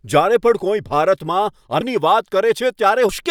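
At 1.81 s and again at 3.09 s the speech jumps forward as compressed frames are skipped: whole coded frames never reach playback. The first gap loses about 0.4 s, which fits around ten 32 ms frames, and the second about half a second.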